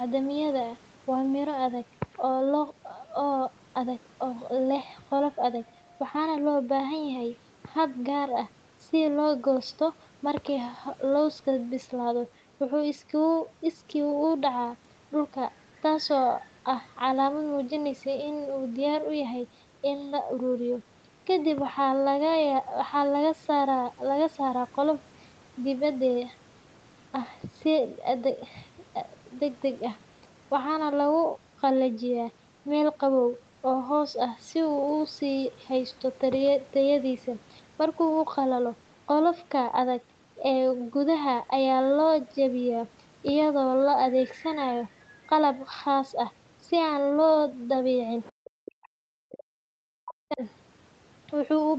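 From 48.24 to 48.5 s a faint second voice, roughly 25 dB below the main talker, slips into the recording. This is the other side's voice leaking through, most likely because the echo canceller left some of the far end's loudspeaker sound in the microphone signal. Unlike crosstalk or a background talker, it is the far end's own voice coming back through the loudspeaker.

Right after, from 48.56 to 49.67 s, and again from 50.01 to 50.42 s, the talker's own voice drops sharply, by as much as roughly 40 dB. This is speech suppressed in double talk, likely the canceller mistaking the talker for echo while both sides spoke and ducking everything. Packet loss would leave short gaps or smeared concealment.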